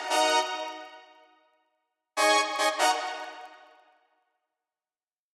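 A low, regular buzz of ticks at about 23.4 Hz runs through the whole clip, growing louder and softer with the sound's level. It is a filter restarted on every block: its state is cleared each time, so every block, which fits 2048 samples, starts with a small transient.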